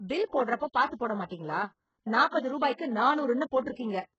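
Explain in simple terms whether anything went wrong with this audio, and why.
Something did go wrong: heavy HE-AAC compression damage runs through the whole speech clip. Nothing gets through above 8 kHz, and the treble that's there sounds rebuilt rather than real, so s sounds come out gritty and lispy. That's likely a hard-squeezed HE-AAC encode faking the top end.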